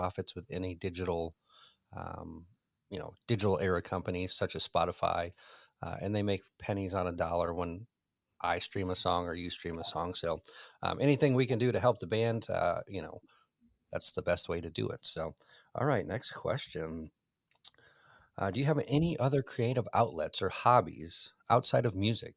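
No audible technical faults detected.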